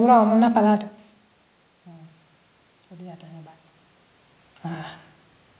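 The speech carries no technical faults: the background room noise belongs to the recording, the level shifts near half a second and again around three and a half seconds are the talker moving relative to the microphone, and the absence of anything above 4 kHz matches a narrowband call path that points to a 64 kbps G.711 mu-law codec.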